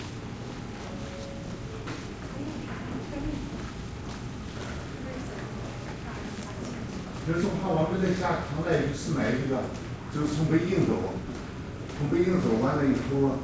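Everyday sounds come through with no technical faults, and the absence of anything above 8 kHz fits the WebRTC call path they went through, pointing to a wideband codec such as G.722.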